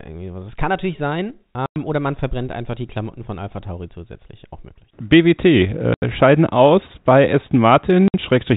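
At 1.66 s the speech drops out for 100 ms. It happens again at 5.94 s for 80 ms, and at 8.08 s for 60 ms. This is packet loss filled with silence. Packets never arrived, and the receiver played nothing in their place. Each gap is a multiple of 20 ms, which fits 20 ms packets. The holes have hard edges. The narrow telephone band of the G.711 coding carries on around them.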